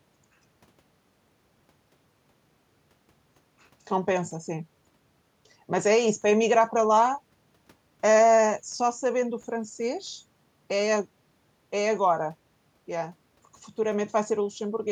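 No technical faults can be heard anywhere in the recording; the speech signal stays continuous and stable throughout.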